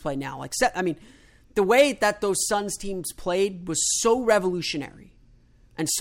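Nothing is technically wrong with this speech clip.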